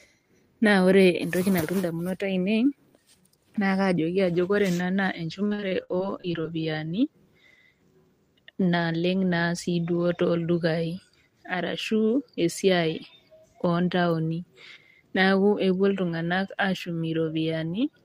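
From 5.47 to 6.45 s the speech breaks up with repeated packet loss, giving a robotic sound. Roughly a dozen short dropouts, none longer than about 48 ms, arrive in quick succession. Each is patched by stretching the preceding sound, so about a quarter of that second is concealment. On a spectrogram the stretch shows smeared, frozen harmonic bands cut by thin vertical breaks, and the waveform looks choppy with repeated, flattened segments.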